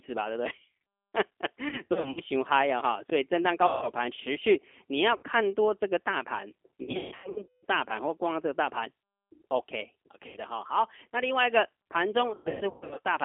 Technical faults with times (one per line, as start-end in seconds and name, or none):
0.00-13.24 G.729 codec
1.69-2.22 VoIP packet loss concealed by the speech codec
3.67-3.89 VoIP packet loss concealed by the speech codec
5.17-5.23 VoIP packet loss concealed by the speech codec
6.82-7.64 VoIP packet loss concealed by the speech codec
10.27-10.38 VoIP packet loss concealed by the speech codec
12.34-12.99 VoIP packet loss concealed by the speech codec